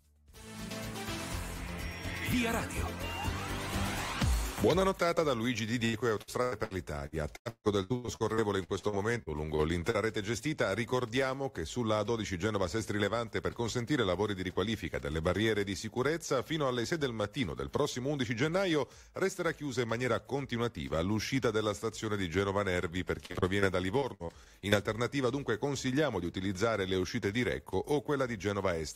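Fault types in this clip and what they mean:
Repeated packet loss (robotic sound): audio packets went missing or arrived too late in quick succession, and each hole was bridged by extending the last sound heard, so the result turns choppy with pieces missing. Here it hits hardest from 5.85 to 9.96 s, where about a quarter of that stretch is patched over in short gaps up to 160 ms, then returns in two brief bursts at 23.26 to 23.64 s and 24.00 to 24.74 s.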